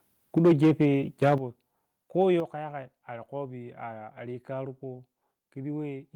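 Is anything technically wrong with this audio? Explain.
Yes. From 0.37 to 0.85 s, and again from 1.22 to 1.34 s, there is likely microphone overload. The peaks run about 5 dB and then about 4 dB past the converter's limit, and a sizable share of the samples are flattened. The flat tops add a harsh crackle to the loudest syllables. It sits only on those peaks, with no overall change in level, which sets it apart from a volume step.

At 0.38, 1.38 and 2.40 s the level drops abruptly by about 3, 8 and 6 dB. This is likely the microphone volume being stepped down by the call software reacting to a microphone it found too loud or clipping. Voice and background fall together and stay lower, with no added distortion.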